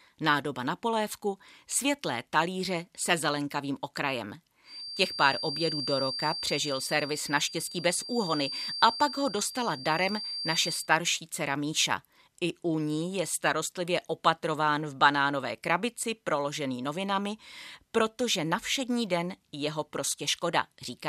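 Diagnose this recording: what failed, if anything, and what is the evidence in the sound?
A feedback whistle runs from 4.62 to 10.91 s. It is a thin 4.7 kHz tone, roughly 10 dB under the speech, swelling and fading slowly in level. A spectrogram would show one narrow horizontal line. The likely cause is a loudspeaker-to-microphone loop at the acoustic front end, held just short of runaway.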